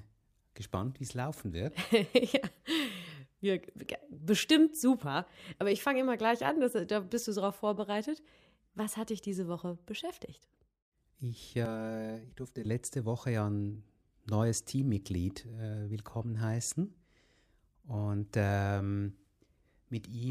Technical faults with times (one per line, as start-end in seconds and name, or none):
11.65-12.65 channel delay (comb filtering)